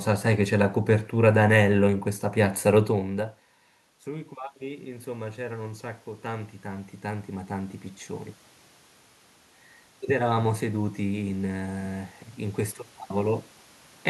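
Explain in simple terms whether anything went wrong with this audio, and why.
The automatic gain control misbehaved: after the talker moved away from the microphone around 3 s, it found the sound too quiet and slowly turned itself up, from 4.05 to 7.82 s and again from 10.11 to 13.5 s. Each time, the voice and the room's background noise swell together.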